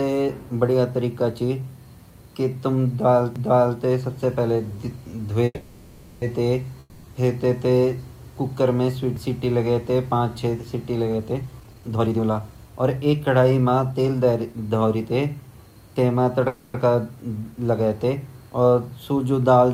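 At 3.36 s a CD skip gives a sharp tick, and the speech jumps abruptly to a different point, as if the laser had been knocked onto another turn of the disc's spiral. The player mutes for only a few milliseconds. On a waveform this is a tiny flat notch with a discontinuity on either side. On a spectrogram it is a thin full-height vertical line, with the speech pattern not lining up across it.

From 5.45 to 6.24 s there is a call audio freeze. The last sound is stretched into a fading buzzy tail for about 770 ms, ending in roughly 30 ms of silence. The speech then resumes exactly where it stopped, with nothing lost. This is the likely result of delayed packets draining the jitter buffer, and it adds about 0.77 s of delay. A spectrogram shows horizontal smeared bands that repeat the last spectrum and slowly dim. The waveform shows a periodic envelope that decays.

From 6.80 to 7.06 s comes a long network dropout. 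A similar fading buzz lasts about 240 ms, with about 20 ms of silence before the sound returns. This time the audio comes back further on, and about 240 ms of speech is gone, likely because those packets never arrived. It looks like the freeze, but the speech on either side does not join up.

At 9.16 s a second CD skip brings the same tick, near-instant mute and jump, seen as another thin vertical line.

From 11.17 to 14.54 s a jitter buffer speed-up makes the speech run at about 123% speed with unchanged pitch, so it sounds hurried. Short pitch-period pieces are cut out repeatedly, about 0.7 s in total, to drain excess buffered audio. Syllables and pauses look compressed in time, while harmonic spacing on the spectrogram stays the same.

From 16.48 to 16.76 s another call audio freeze stretches the sound into a fading buzz for about 260 ms, without reaching silence. The speech then continues with nothing missing, the likely sign of another late packet burst.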